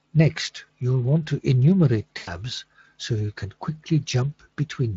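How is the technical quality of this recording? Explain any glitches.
There's one real glitch, plus the light texture you'd expect from a Speex stream at this bitrate. Right after "you'll want to enumerate", from 2.17 to 2.29 s, there's VoIP packet loss concealed by the speech codec. About 100 ms of packets went missing, so the decoder stretched its last pitch and filter into a fading buzzy tone or coloured noise that lingers briefly.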